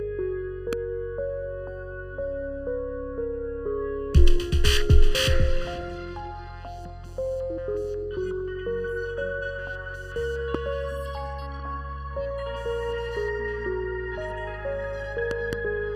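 Throughout, the audio has channel delay (comb filtering): one channel lagged the other by roughly 0.7 ms before the two were summed to mono, so shared content cancels at evenly spaced frequencies starting near 700 Hz. It sounds hollow and phasey; the notches stay fixed, unlike a sweeping flanger, and because they repeat at even spacing it is not a single dip like an EQ cut.

A loud pop lands at 0.73 s, another at 10.55 s, and a pair of pops falls between 15.31 and 15.55 s, each well above the surrounding level. They are likely voltage steps from a plug, a switch or static. Each is a sharp, isolated click over the sound, which continues underneath rather than dropping out.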